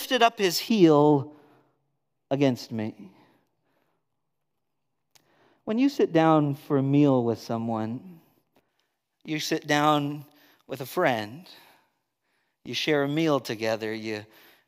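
From 0.69 s, just after "up his", to 8.69 s, just before "you sit down with", de-emphasis was applied wrongly. A treble cut meant to reverse pre-emphasis hit audio without it or was applied twice, tilting the response to about 11 dB down at 10 kHz relative to 1 kHz, so the speech sounds dull and muffled.

Inside that stretch, at 4.53 to 4.58 s, frames are out of order. Two adjacent runs were decoded in swapped sequence, which fits single frames of about 23 ms each trading places. The 46 ms patch plays as a brief garbled flutter, with no time lost.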